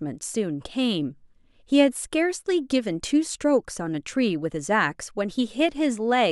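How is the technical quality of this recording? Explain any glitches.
No glitches turn up anywhere in this speech recording. There is no technical fault here to explain.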